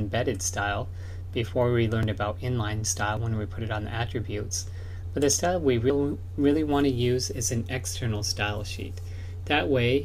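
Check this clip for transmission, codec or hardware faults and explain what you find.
Three short skips are audible, at 2.03 s, 3.17 s and 5.90 s. Each is a jump forward, and none leaves a gap of silence. This is likely a dropped buffer (overrun). The hardware overwrote samples before they were read. Roughly 10 ms goes missing at the first two points and about 40 ms at the third.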